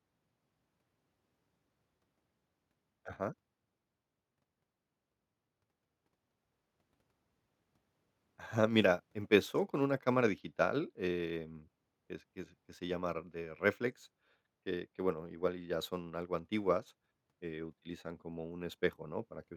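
No audible technical faults present.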